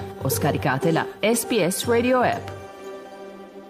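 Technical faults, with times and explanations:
No technical faults detected; no dropouts, level jumps or discontinuities anywhere in the clip.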